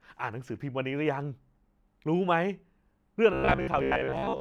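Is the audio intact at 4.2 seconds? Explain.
No, at 4.2 s you're in the middle of robotic sound from repeated short buffers, running from 3.33 s to the end. The likely cause is audio arriving too slowly, so roughly a 15 ms chunk gets looped over most of the stretch, locking the speech into a stiff, metallic buzz at about 67 Hz.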